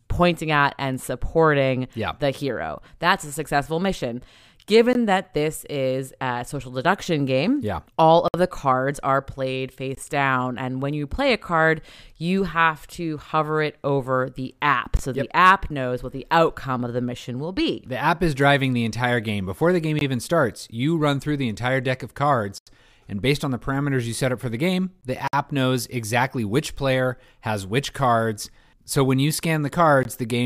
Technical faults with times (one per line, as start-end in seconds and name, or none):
4.93 gap between chunks
8.28-8.34 block of digital silence
9.95 gap between chunks
14.97 gap between chunks
19.99 gap between chunks
22.58-22.67 block of digital silence
25.01 gap between chunks
25.28-25.33 block of digital silence
30.03 gap between chunks